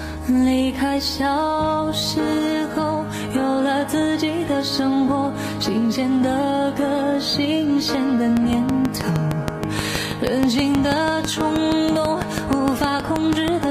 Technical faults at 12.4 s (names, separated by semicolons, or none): train of clicks